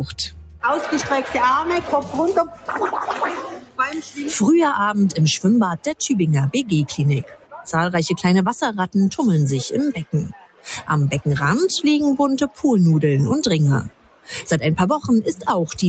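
A speech-style noise suppressor has been left running on this sound the whole way through, reading steady tones and tails as noise, so the level pumps by roughly 10 dB. You can hear it bite hardest as sound cut by the noise suppressor at 0.06–0.63, 2.47–2.69, 3.48–3.79, 4.02–4.18, 7.23–7.69, 10.32–10.89, 12.49–12.64 and 13.89–14.31 s, where held parts sink by about 11 to 18 dB.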